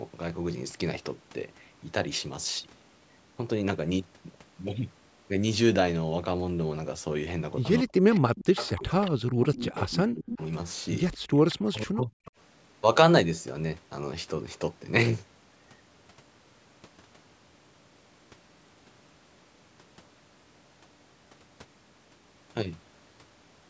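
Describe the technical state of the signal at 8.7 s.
At 8.7 s the signal carries an echo leak, from 8.11 to 9.11 s: a far-end echo canceller likely failed to fully suppress loudspeaker pickup, so a copy of the speech returns about 223 ms late, faint at roughly 15 dB below the direct sound, audible as a trailing repeat.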